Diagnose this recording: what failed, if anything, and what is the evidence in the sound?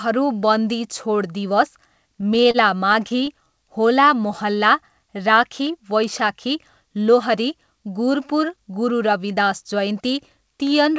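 Repeated stalls (stutter) from network jitter at the jitter buffer, in two bursts: 2.21–2.57 s with four gaps (longest 30 ms) and 2.93–3.45 s with four gaps (longest 14 ms). The buffer kept running dry and stretched the last sound, so the audio drags but loses nothing. A spectrogram shows brief flat horizontal smears, and the waveform shows repeated cycles. Content stops at 8 kHz, which fits G.722 at 64 kbps.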